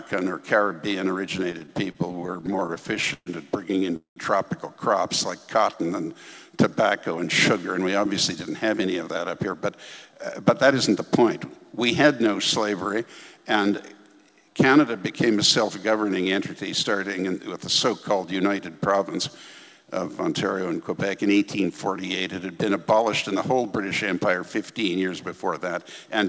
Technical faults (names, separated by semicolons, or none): repeated stalls (stutter); call audio freeze; jitter buffer speed-up